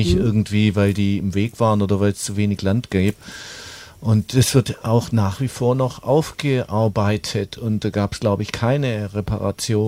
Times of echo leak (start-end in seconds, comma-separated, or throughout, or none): none